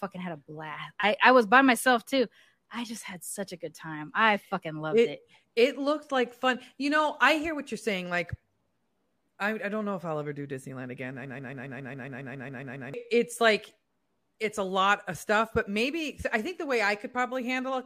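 At 11.25 s the speech locks into a broken-record loop: a fragment of about 0.14 s repeats exactly, back to back, 12 times until 12.94 s, producing a rapid stutter before the talker resumes on "it's like". The likely cause is a stalled player or stream resending its last held fragment, so the audio that belonged to that stretch is lost. On a waveform the identical 0.14 s shape tiles across the span; a spectrogram shows the same pattern stamped in vertical stripes.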